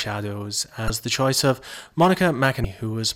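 Speech with two short breaks from damaged data in a compressed stream, at 0.87 to 0.90 s and 2.62 to 2.65 s. At each, corrupted frames make the decoder misread or drop them and lose sync until the next frame header, leaving a brief disturbance about 30 ms long.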